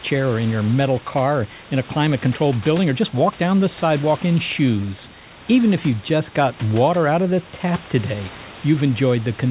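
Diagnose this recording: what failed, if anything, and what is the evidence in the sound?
Nothing in the signal chain has failed: the room noise sits about 18 dB below the speech, and the band stops at 4 kHz with the ordinary coding texture of a 64 kbps G.711 mu-law call path, which is how that codec normally sounds.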